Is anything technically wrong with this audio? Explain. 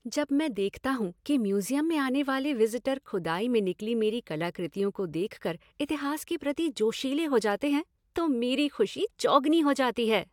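No, nothing is technically wrong with this audio.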